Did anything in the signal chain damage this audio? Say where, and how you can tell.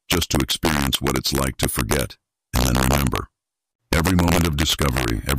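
Yes. Throughout the clip the loudest peaks break into hard, violent cracks, far sharper and uglier than ordinary clipping. This is integer overflow at a gain or sample-format conversion stage. The signal was pushed only about 1 dB past full scale, so just a small fraction of samples, well under one percent, exceed the limit. Instead of being held at the maximum, each of those samples wraps around to the opposite extreme, and every such jump produces a crack.

At 2.96 s there is a brief, sharp blip, a squeak of energy with no relation to the sound around it, peaking somewhere near -15 dBFS. This is a corrupt frame decoded at the codec stage. Flipped bits in what sounds like a couple of compressed frames led the decoder to apply wrong gains or misread spectral codes, and it played the result anyway. That placed energy at the wrong frequencies for only a few milliseconds.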